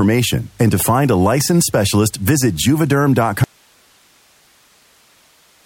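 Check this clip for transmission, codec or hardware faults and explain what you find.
There is one fault: an audio dropout to a faint residue from 3.44 s to the end of the speech. The signal cuts off abruptly and does not return, leaving only steady hiss around 40 dB below the speech level. This is likely a lost link or interrupted source while the downstream path stayed live. On a waveform, the envelope collapses to a thin flat band. A spectrogram shows a sharp vertical edge followed by uniform broadband noise with no speech structure.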